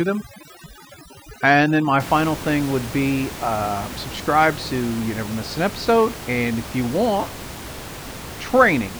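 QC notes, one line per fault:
0.0 to 2.0 s, overdone noise removal: the background drops and breaks up into twinkling, chirpy bits until the processing lets go just before "final thing would be". A denoiser set too hard is pulling individual frequency bands down whenever they sit near its noise estimate, taking quiet speech detail with them. Unlike codec swirl, the damage tracks the noise floor. Past 2.0 s, room noise returns about 13 dB below the speech.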